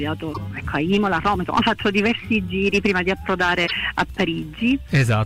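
At 0.30 to 0.38 s, a brief glitch cuts through the sound. Another glitch comes at 3.64 to 3.71 s. Both come from damaged data in a compressed stream. The decoder hits corrupted bytes, misreads those frames and loses sync until it finds a valid header.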